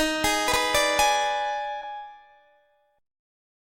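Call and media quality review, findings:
Chunks out of order, 0.48–0.56 s. Brief jumbled blip. One 40 ms chunk played one slot late, after the chunk meant to follow it. No audio lost. Three hard joins. Probable component: jitter buffer or playout write ordering.

Short concealed packet loss, 1.79–1.83 s. Short smear. About 20 ms of audio missed the decoder deadline. Concealment extended the preceding sound for 18 ms, then blended back. Probable component: network path, with decoder loss concealment filling the gap.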